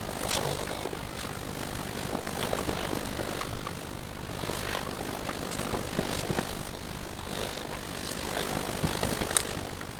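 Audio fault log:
throughout: overlap-add ripple. The frames were windowed and rejoined with an overlap that doesn't sum to a steady gain, so the level pulses by about 11 dB once per frame, around 50 times a second. This gives the sound a rough, buzzy tremolo.
0.31–0.35, 2.21–2.27, 3.55–3.61 and 7.53–7.57 s: short concealed packet loss. Audio arrived too late for the decoder. The receiver extended the preceding sound for 20, 40, 40 and 20 ms before blending back, leaving a brief smear or wobble where that material is missing.
6.75–6.83 s: burst of packet loss. Several consecutive packets failed to arrive in time. Concealment stretched the last sound over 60 ms while fading it down, so a held buzz or decaying hiss replaces the missing audio before playback resumes further along.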